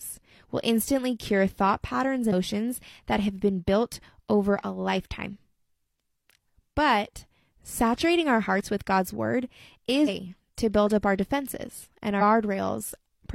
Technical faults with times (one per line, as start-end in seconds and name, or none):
2.28-2.33 damaged data in a compressed stream
10.03-10.09 damaged data in a compressed stream
12.17-12.22 damaged data in a compressed stream